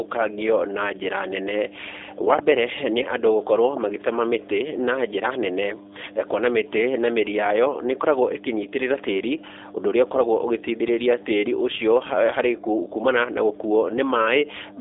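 Mains hum runs through the whole recording: a steady 50 Hz tone, fairly loud at roughly 10 dB below the speech, with some low harmonics. Power-line current has leaked into the signal path, most plausibly through a ground loop or a nearby transformer, and it drones under every pause.

G.729 codec damage is also present from start to finish. The speech sits in a narrow telephone band of about 300 Hz to 3.6 kHz, with nothing above 3.8 kHz. The texture is plainly rough and synthetic, which fits an 8 kbit/s G.729A stream rebuilding the speech from a filter, a pitch predictor and sparse pulses.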